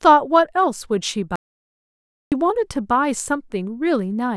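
From 1.36 to 2.32 s the speech drops to dead silence, an audio dropout to silence. Unlike a quiet pause, no room tone remains, which points to a likely lost input.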